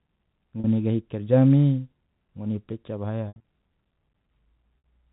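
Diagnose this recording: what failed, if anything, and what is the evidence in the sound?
Network stage, packet loss with pitch repetition: at 0.60 s, 3.28–3.43 s and 4.82 s, a repeated pitch period shows as frozen harmonic stripes fading over tens of milliseconds.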